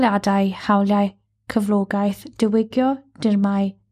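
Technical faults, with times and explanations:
Throughout, MP2 compression: dull, gurgling speech where upper sub-bands flicker on and off, likely from low-rate coding around 80 kbps, showing as patchy, blocky high-frequency gaps on a spectrogram.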